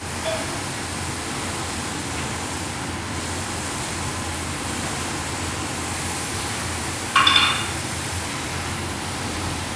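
Everyday sounds carry a gritty, metallic edge throughout, with high content folding back to unrelated pitches just below about 11 kHz, roughly 10 dB under the sound itself. This is aliasing, consistent with a drop to a 22 kHz rate without an anti-alias filter first.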